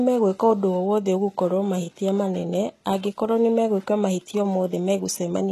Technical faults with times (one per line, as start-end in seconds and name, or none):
0.00-5.52 HE-AAC compression